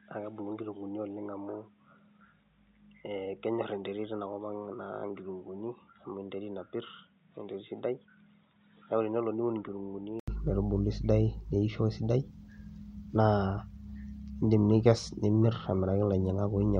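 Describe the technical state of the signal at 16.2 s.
At 16.2 s the speech signal is intact, with no audible technical fault at that moment.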